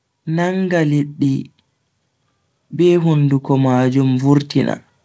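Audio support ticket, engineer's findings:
Automatic gain rising: AGC judged the input too quiet and ramped gain up about 5 dB from 2.7 to 4.55 s. Speech and background swell together gradually. Band limited at 8 kHz by the G.722 call path.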